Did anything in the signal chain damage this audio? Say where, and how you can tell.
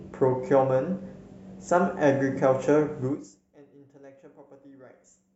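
No, nothing in the chain audibly damaged this speech; the signal is continuous and intact, and the level rises and falls only smoothly, as a fader would move it.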